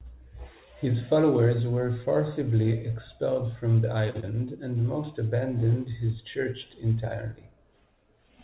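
At 4.1 to 4.17 s, just after "forcibly expelled from the", there is a short stall from a late packet. The jitter buffer ran dry, so the last sound was held for about 40 ms until the packet arrived and playback resumed without losing anything. It sounds like a slightly buzzy prolongation. A spectrogram shows the harmonics frozen flat and stretched sideways, and the waveform shows near-identical repeated cycles.

Right after, from 4.2 to 4.25 s and still before "and most abandoned his", comes a short concealed packet loss. About 30 ms of audio never arrived, and roughly 24 ms of synthesized continuation bridged the gap before blending back. It is heard as a brief smear or wobble. A spectrogram shows a smoothed patch within the narrowband G.711 signal, which stops at 4 kHz.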